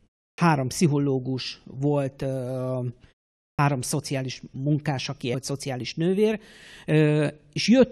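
At 0.33 s and again at 3.53 s, there is a clipped start after a pause. In both places the output device seems to have dropped into a low-power state during the silence and did not wake and lock in time, so the opening of the sound is cut off. About 51 ms is lost before "pszichológus volt", and about 58 ms before "szociális munkás aki". The pauses before these two points last 0.33 s and 0.48 s. Each phrase starts abruptly, with no natural onset. This is different from muted pauses. Muted pauses only fade the background to silence and bring the sound back in time, so nothing is taken from the start of the next phrase. Here the first sounds are actually missing.

At 5.33 s, just after "szociális munkás aki", the audio jumps forward with a small blip. The likely cause is a stream segment skipped: one chunk of the segmented stream failed to load, and the player went straight on to the next chunk. 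Programme material is missing from that point. The clipped starts are different because they only trim the onset after a pause.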